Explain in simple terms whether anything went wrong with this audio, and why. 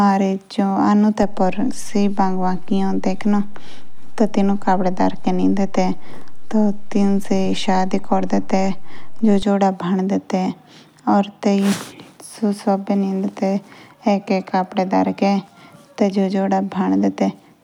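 A low thump at 1.23 s and another at 9.43 s come from a DC step: the waveform's resting level jumped, held steady, then dropped back.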